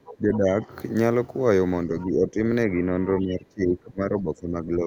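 Speech clip with three stretches where the level sags hard: from the start to 0.5 s, 1.87 to 2.37 s, and 2.68 s to the end, where the dip is deepest, around 20 dB, versus roughly 15 and 10 dB earlier. It sounds like speech suppressed in double talk, with the echo canceller likely unable to tell this talker from the far-end echo while both were speaking, so it pulled everything down.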